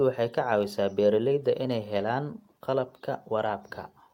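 There are no technical faults to describe in this clip, so there is nothing to place in time order.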